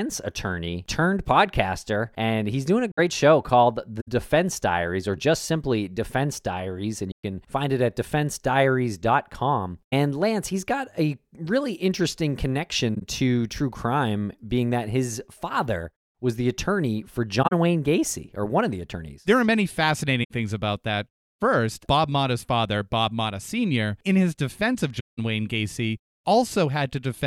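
The speech has eight corrupt frame concealed events, at 2.92–2.99, 4.00–4.08, 7.12–7.23, 9.87–9.93, 12.94–13.02, 17.42–17.53, 20.23–20.31 and 24.99–25.19 s. Damaged AAC frames were detected by the decoder and patched over, with each spot lasting 60 to 200 ms. The lengths fit a few frames each, with the longest at the end.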